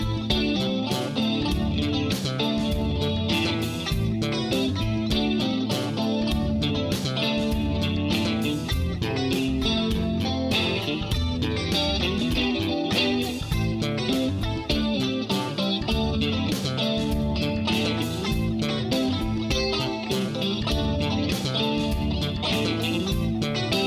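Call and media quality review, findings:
Nothing to flag here: no audible problems anywhere in the recording, so no ticket items to raise.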